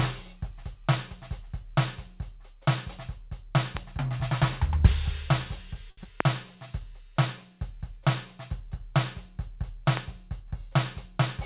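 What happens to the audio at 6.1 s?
A short concealed packet loss runs from 6.03 to 6.07 s. Missing music was filled by extending the previous sound. It smears briefly.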